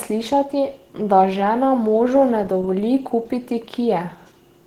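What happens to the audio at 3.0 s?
At 3.0 s the speech sounds hoarse and grainy, with a rough, noisy edge on voiced sounds, as it does through the whole clip. This is likely Opus compression in its hybrid speech mode, consistent with a low bitrate near 16 kbps.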